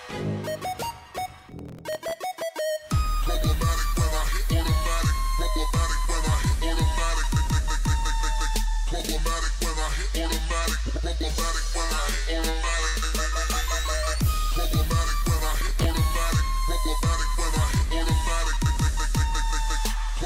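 From 1.18 to 2.42 s there's processor overload crackle: the system keeps missing deadlines on very short buffers, around a millisecond and a half, and replays stale audio with hard edges, so it's a gritty tearing. A shorter burst returns at 15.37 to 15.86 s.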